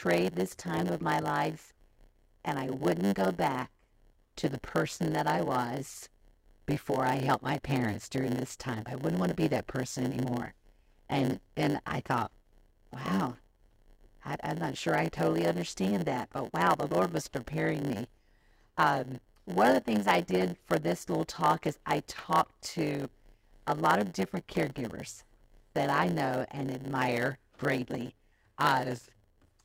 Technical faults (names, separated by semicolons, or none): block size mismatch (padded)